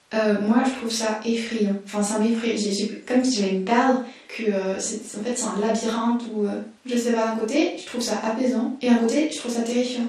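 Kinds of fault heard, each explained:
MP2 compression: likely an MPEG Layer II encoder short of bits, switching off upper sub-bands, so the speech sounds dull, gurgling and granular, consistent with an 80 kbps rate.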